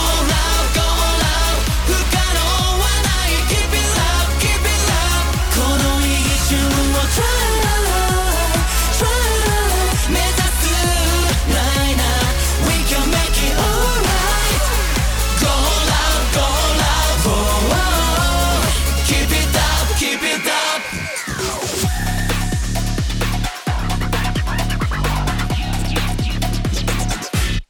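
Two devices likely running on mismatched clocks cause clock drift buffer slips: a short block of samples is dropped or repeated every 1.82 s from 0.31 s to 27.61 s, heard as regular clicks.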